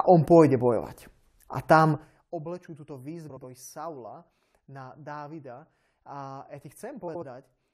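Twice in this speech clip, frames out of order: two adjacent blocks of roughly 70 ms each were delivered swapped and decoded in that order, which fits runs of three frames apiece. From 3.29 to 3.43 s and again from 7.08 to 7.23 s, the stretch plays with its halves exchanged. The result is a brief garbled flutter, and the overall timing stays intact.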